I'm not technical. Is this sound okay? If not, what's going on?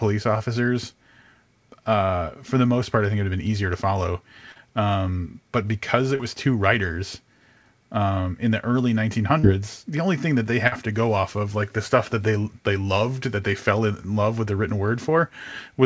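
No. At 4.52, 6.15 and 9.39 seconds there are brief smears or wobbles lasting well under a tenth of a second. Each is a short concealed packet loss: a bit of the call arrived too late, and the receiver guessed the gap by stretching the preceding sound.

At 10.67 seconds, a slightly longer burst of packet loss briefly sounds like a held buzz or fading hiss. Several pieces went missing together and were covered the same way.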